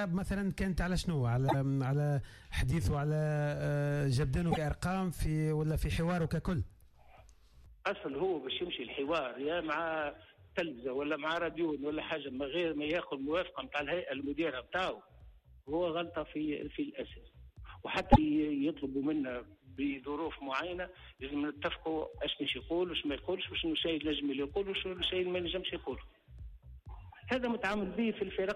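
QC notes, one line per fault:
1.48–1.55 s, 4.51–4.58 s, 18.12–18.19 s, broken MP3 bit reservoir: each ~70 ms, sound skips ahead with a chirp, noise burst or short gap; likely dropped frames whose data is lost. Spectrogram shows brief broadband smears or gaps; waveform shows discontinuities.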